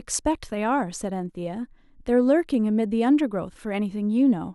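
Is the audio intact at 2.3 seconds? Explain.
Yes, at 2.3 seconds the speech plays through cleanly with no audible dropout, click, distortion or other fault.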